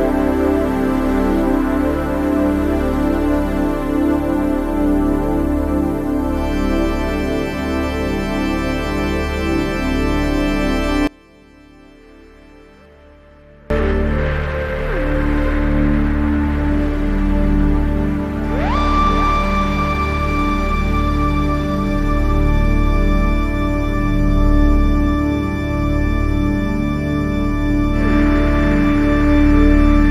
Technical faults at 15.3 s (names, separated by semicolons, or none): none